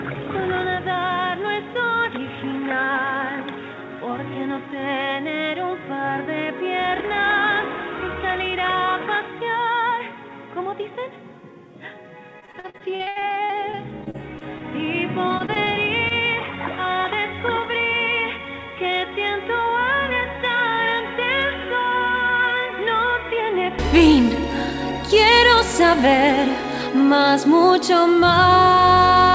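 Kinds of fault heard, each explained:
Input switched to a poorer device: The system likely took its input from a lower-grade microphone or a headset's call profile for the first 23.79 s, then moved back to the better source. While on that device, nothing above 3.8 kHz gets through, so the sound is dull and boxy, about 10 dB quieter, with a noise floor roughly 35 dB below the signal. At 23.79 s it opens up and brightens with no gap at the change.
Repeated packet loss (robotic sound): Packets went missing again and again, and the receiver patched each hole by extending the last stretch of sound, only to hit another hole moments later. From 12.40 to 14.62 s many short gaps, up to 72 ms, leave 22% of the span concealed, and a second run from 15.28 to 15.68 s has gaps up to 24 ms. Both come out choppy, with pieces clipped away.
Short stall from a late packet: One packet arrived late, the jitter buffer ran dry, and the receiver held the last sound for 22 ms until it turned up, then carried on from the same place. 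Nothing is lost. Between 16.08 and 16.13 s a sound lingers slightly too long, with a faint buzz or dip, just after the second choppy run has ended.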